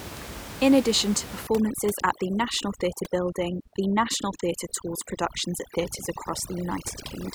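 Speech clip with overdone noise removal kicking in from 1.47 s, right after "addition to", and running to the end. The room noise, sitting about 13 dB under the voice, drops and breaks up into twinkly specks, and the quieter parts of the voice get stripped along with it.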